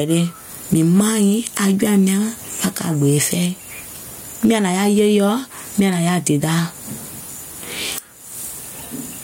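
Gain pumping runs throughout this speech clip, with the level swinging by around 15 dB. Loud and quiet passages sit squashed together, likely from input gain set far too high and a fast limiter clamping down on every peak.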